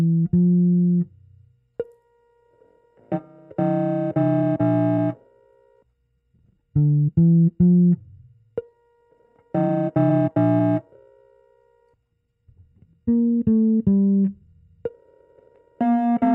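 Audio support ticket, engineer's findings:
Rushed delivery from 4.13 s to end, pitch unchanged: time-stretched section, pace about 1.35x. Likely a time-stretch step in the processing chain, compressing the audio to fit a length by dropping short slices while holding pitch.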